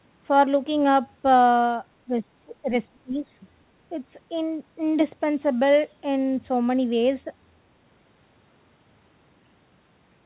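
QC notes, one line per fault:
2.05–2.69 s and 2.89–3.28 s, speech suppressed in double talk: the speech dips by around 25 dB, likely because an echo canceller mistook it for far-end echo.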